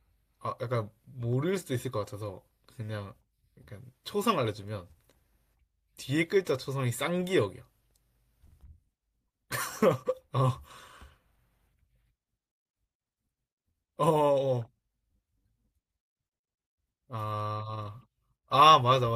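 From 7.44 to 8.84 s the speech carries CD scratch ticks: seven short ticks spaced evenly at about five per second, each no longer than a couple of milliseconds. A blemish on the disc spoils more data than error correction can rebuild once per revolution, so the player patches or mutes those samples. The strict regular spacing, tied to disc rotation, sets this apart from random clicks or dropouts.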